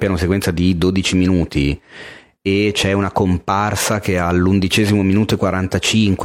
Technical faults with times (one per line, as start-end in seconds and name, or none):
none